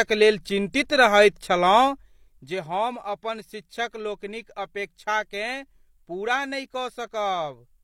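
From 1.77 to 2.61 s, a gain change moves in unsmoothed 1 dB steps, lowering the level by about 10 dB at roughly fifteen steps a second. Each jump adds a small click, so zipper noise ticks over the speech just before "हम अपन शिक्षक लोकनिक".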